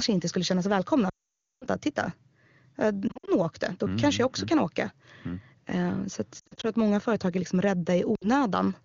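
From 1.09 to 1.65 s a long burst of lost AMR speech frames hits: the decoder repeats its last good pitch and vocal-tract settings with falling gain, so the sound smears and quickly fades to a hole, showing as flat, fading harmonics and then a blank spectrogram gap. Shorter scattered losses at 3.07 to 3.31 s (before "åkte då mm kanske") and 6.39 to 6.69 s (before "att många företag är") cause brief dips and warbles, and a 60 ms loss at 8.16 to 8.27 s, after "många företag är liksom", leaves a small notch in the waveform. The clean wideband AMR-WB sound fits its top 23.85 kbit/s mode.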